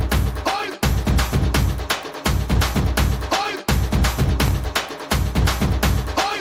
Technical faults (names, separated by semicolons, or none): processor overload crackle